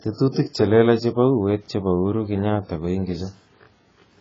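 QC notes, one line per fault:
throughout, AAC compression: the speech sounds dull and smeared, with nothing above 7.6 kHz and a warbly, fizzy edge on sibilants. That's likely a heavy AAC-LC encode at something like 16 kbps, where the encoder chops the top end and starves what's left.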